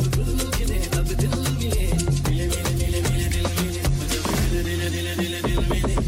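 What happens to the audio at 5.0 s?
Just before 5.0 s, from 4.94 to 4.97 s, a corrupt frame is decoded: one damaged compressed frame plays with misplaced energy, giving a brief blip near -20 dBFS, a narrow vertical smear on a spectrogram.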